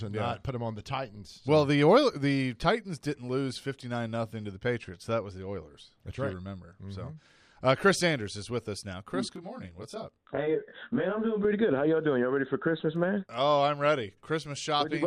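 From 9.36 to 11.45 s, channel delay (comb filtering): one channel lags by about 20 ms before a mono sum, carving evenly spaced notches from around 20 Hz upward, leaving the sound rough and slightly doubled.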